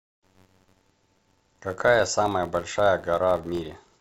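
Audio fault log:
throughout, filter restarted on every block: there's a steady buzz at about 93.8 Hz riding under the speech, getting louder and quieter with it. The filter drops its state at each block boundary and kicks off a small transient every time, which fits a 512-sample buffer.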